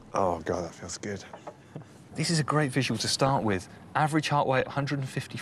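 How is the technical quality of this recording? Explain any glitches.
Two stretches of burbling corruption break through the audio, from 2.90 to 3.88 s and again from 4.53 to 4.88 s. Short blips of noise appear in single bands. This is DAB burbling: with marginal reception, bit errors at a rate somewhere under one percent slip past error correction into the MP2 data, scrambling samples and scale factors so individual sub-bands jump out of place.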